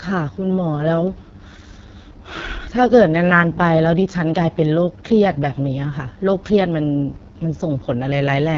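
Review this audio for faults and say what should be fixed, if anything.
The whole clip carries heavy AMR wideband (HD Voice) codec damage. The speech has the rough, raspy texture of a low-rate vocal-tract model straining to follow the voice, which fits the lowest AMR-WB mode, around 6.6 kbit/s. Nothing sounds above about 7.2 kHz, and the top band has a synthetic, noisy sheen. That band edge distinguishes it from narrowband telephone coding, which stops near 3.4 kHz. The raspiness distinguishes it from a plain low-pass filter, which dulls the sound without adding grit. To prevent it, record or transfer the speech directly, or force the call to AMR-WB at 12.65 kbit/s or higher.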